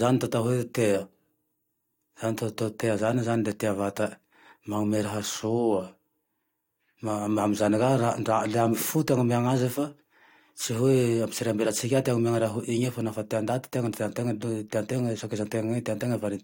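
No technical faults audible at any point in the speech recording.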